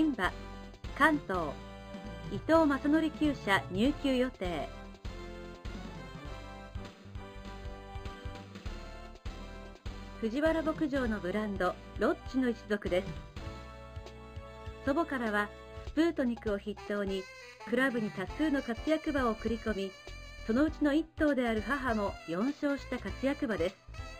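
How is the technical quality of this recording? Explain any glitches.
Quality is held back by imaging from linear upsampling, present for the whole recording. The rate conversion joined samples with straight lines, which filters poorly, which fits an original rate of about 11 kHz raised to 48 kHz. The top of the original band is dulled, and a faint mirror image of the spectrum, roughly 30 dB down, sits above it, first appearing at about 5.5 kHz to 11 kHz. It comes through as a light metallic shimmer on bright, sibilant parts of the sound.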